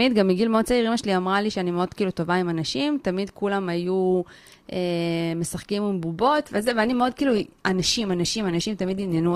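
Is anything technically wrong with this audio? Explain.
Yes. From 6.19 s to the end, the speech switches without a gap to an adaptive stream at a lower bitrate. The player evidently fell back to a cheaper rendition when throughput dipped. Codec artefacts rise, consistent with a drop from roughly 64 to 16 kbit/s Opus.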